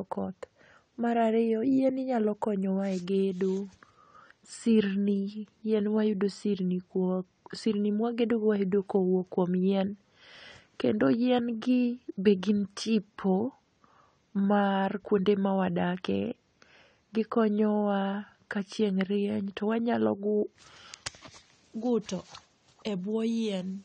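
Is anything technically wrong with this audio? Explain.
Yes. Throughout, the speech shows AAC compression, likely AAC-LC at a rate fitting about 32 kbps. It removes everything above 9 kHz, leaving the sound plainly dull and smeared.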